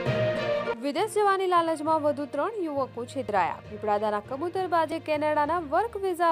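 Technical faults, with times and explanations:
3.29 s and 4.92 s, dropped buffer (overrun): at each point the sound jumps forward without any gap, a bigger skip at 3.29 s, roughly 15 ms missing, and a tiny one at 4.92 s, only a few milliseconds. The likely cause is the capture side not collecting its samples before the hardware wrote over them, so that chunk was lost and the audio on either side got spliced straight together.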